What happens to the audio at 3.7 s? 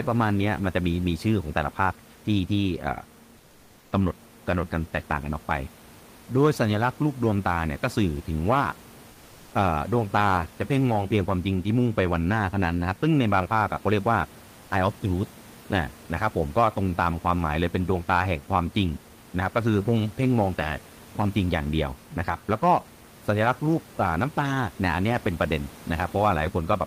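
From 3.37 to 3.91 s, about half a second, the real background drops out and is replaced by a flat, featureless hiss about 2 dB quieter, with none of the room's texture. This is comfort noise in place of the background, likely from Opus discontinuous transmission: during the pause the sender's voice detector stopped sending audio, and the receiver filled the gap with synthetic noise roughly matched to the room noise it had last heard.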